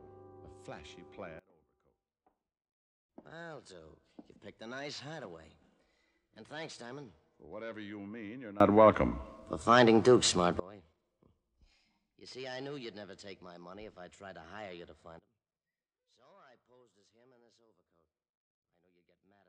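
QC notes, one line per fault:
1.39–3.09 s, sudden gain jump: level drops by about 24 dB in a single step, with the noise floor falling along with the sound, then returns abruptly. Likely an unramped digital gain change.
8.60–10.60 s, sudden gain jump: level rises by about 23 dB at once, with background noise rising equally, then snaps back. Likely the same unramped gain step.
15.19 s to the end, sudden gain jump: level falls by about 20 dB and stays down. Likely an unramped gain change.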